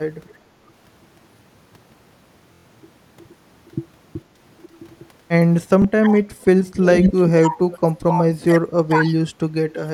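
Right at the start, from 0.24 to 0.35 s, there's a very faint echo leak: a copy of the speech about 455 ms late, well below the main level. That's likely a far-end speakerphone whose echo canceller let some of its own playback slip back.

At 2.54 to 2.66 s you get a Bluetooth stutter. About 116 ms of audio went missing, which fits roughly five lost packets. The receiver kept replaying its last slice, giving a short buzzy machine-gun run before the sound jumps ahead. A second, single-slice stutter hits at 5.82 to 5.85 s, covering about 23 ms.

From 6.0 to 9.6 s the speech keeps dipping and cutting out, at worst by a lot, roughly 30 dB, for around three seconds in total. That's speech suppressed in double talk. The echo canceller was likely ducking the talker while the other side was also active. Inside that stretch, at 6.95 to 7.13 s, the echo leak returns about 479 ms late and roughly as loud as the speech. 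The suppression comes back briefly from 9.86 s to the end, shallower this time, around 15 dB.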